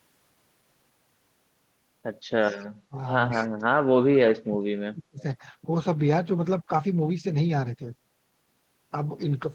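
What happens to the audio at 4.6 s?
The speech is suppressed in double talk from 3.85 to 5.2 s, dropping by about 40 dB, likely an echo canceller attenuating the near talker while both sides spoke.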